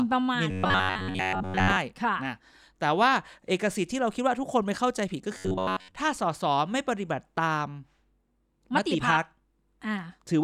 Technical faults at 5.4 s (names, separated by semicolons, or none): robotic sound from repeated short buffers